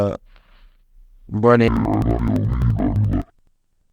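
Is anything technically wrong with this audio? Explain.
Yes. From 1.68 s to the end, the speech drops an octave, doubled and choppy at 11.7 Hz: interleaved audio read as planar, splitting each 85 ms block into half-speed halves.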